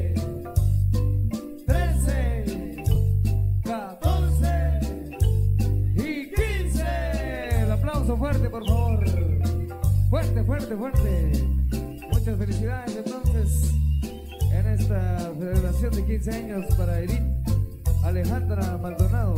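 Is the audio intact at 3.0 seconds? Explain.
No. Just before 3.0 s, at about 2.95 s, lost LE Audio frames leave a 10 ms gap, consistent with a single dropped frame. The LC3 decoder fills it by repeating the previous spectrum with randomised signs, so the sound briefly turns into a short noisy smear.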